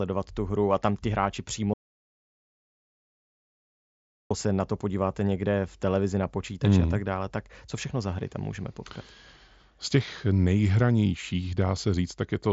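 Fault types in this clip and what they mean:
Audio dropout to silence: The speech stops dead after "a tam ti hráči" at 1.74 s and returns at 4.31 s with "se na to podíváte". For 2.57 s the signal is silent, with no room tone underneath. The likely cause is a lost input, such as a broken link, an unplugged device or an accidental mute, while recording carried on. Whatever was said in that stretch is gone.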